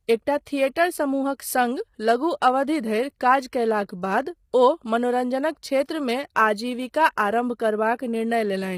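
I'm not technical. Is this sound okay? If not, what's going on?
No. The whole clip has heavy damage from what is likely low-delay AAC compression, a video-call codec, so the voice sounds rough and grainy, with a dull or artificial top end. At 4.53 s there is pre-echo: a brief hiss about 10 ms long arrives just before a sharp sound, softening its start.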